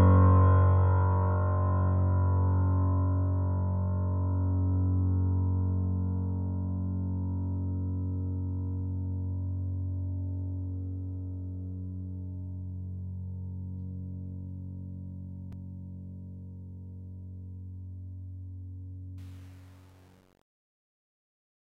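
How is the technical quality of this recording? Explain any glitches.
The music has two faults: a disc skip late in the clip and a gritty fade at the end.

At 15.52 s there is a CD skip. The laser jumped to another turn of the disc's spiral, so the player muted for a few milliseconds and resumed elsewhere. It sounds like a tick followed by a sudden jump in the music. On a waveform it shows as a tiny gap and a discontinuous join, and on a spectrogram as a thin vertical broadband line.

From 19.18 s to the end, the fade-out that begins around 19 s suffers truncation distortion on a fade, worst from about 19.30 s. The gain stage dropped low bits without dither, which fits roughly 8-bit resolution. As the level falls, the waveform collapses into coarse square steps, and the tail turns gritty. A spectrogram shows harmonic hash.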